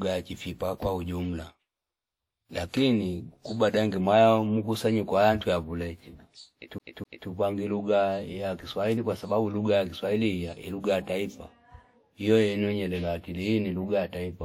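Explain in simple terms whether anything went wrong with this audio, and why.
At 6.78 s, the speech catches like a CD stuck on one turn. A quarter-second piece plays twice with tiny gaps, until 7.29 s.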